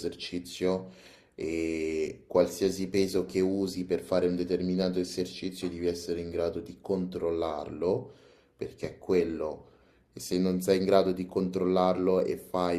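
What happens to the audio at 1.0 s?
Nothing goes wrong at 1.0 s; the speech plays through that moment intact, with no dropout, click or distortion.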